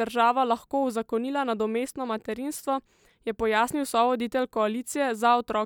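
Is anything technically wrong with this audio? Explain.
No, nothing technically wrong turns up here; it's a speech recording with no faults to point to.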